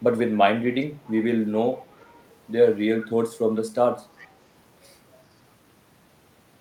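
Echo leak at 0.8–1.11, 1.81–2.31 and 4.19–4.28 s: a faint, separate copy returns 398 ms late, likely from incomplete far-end echo cancellation, unlike room reverb's smear.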